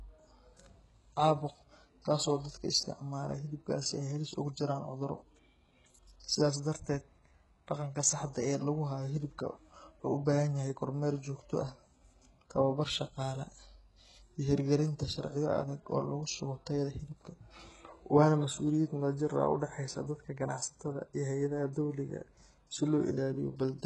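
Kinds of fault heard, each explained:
HE-AAC compression: the treble sounds bright but synthetic, s sounds come out gritty, metallic and lispy, and nothing reaches above 11.5 kHz. The heavy damage fits a bitrate near 12 kbps, likely from spectral band replication rebuilding the top band from copied lower bands.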